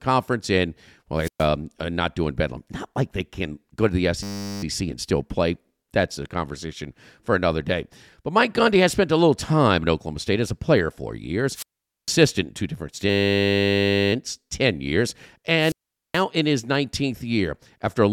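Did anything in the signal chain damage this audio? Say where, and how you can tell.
Yes. Wireless microphone squelch dropouts occur at 1.17–1.48 s, 11.53–12.14 s and 15.57–16.23 s. Each has rising hiss, then near silence of about 120, 455 and 427 ms. The analogue FM radio link faded. The receiver's squelch muted the output until signal returned.

A system hang loop sits at the driver or buffer stage, at 4.23–4.63 s and 13.10–14.13 s. A 10 ms slice repeats exactly, 40 and then 103 times. That gives a steady 100 Hz buzz. The host froze while the hardware kept replaying one ring buffer.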